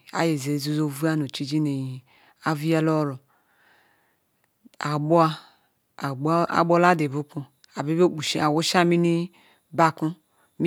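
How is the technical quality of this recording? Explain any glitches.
The recording has one problem, and it sits near the end: periodic USB or driver dropouts from about 8.27 to 10.27 s. Something in the system is stalling the USB bus or audio driver every 0.5 s, and each stall skips a tiny sliver of the speech, a small fraction of a millisecond, without filling the gap. The cut edges join abruptly, so you get a handful of evenly spaced ticks riding on the speech.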